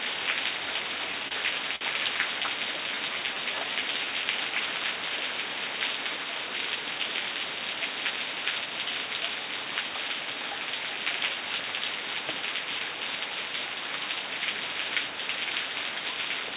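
Everyday sounds carried over a call path with nothing above 4 kHz, which fits a 64 kbps G.711 A-law codec. Repeated stalls (stutter) occur between 1.12 and 1.83 s: late packets drained the jitter buffer five times, and the receiver extended the last sound to fill 107 ms (longest gap 52 ms), so nothing is lost but the audio drags. A jitter buffer slow-down from 2.77 to 4.06 s repeats pitch periods to rebuild the reserve, adding 153 ms and running at 89% speed with unchanged pitch. A jitter buffer speed-up trims short pieces to cut excess delay at 6.17 to 6.99 s (113% speed, about a tenth of a second removed) and 16.25 to 16.56 s (112%, roughly 40 ms removed), hurrying the sound without changing its pitch.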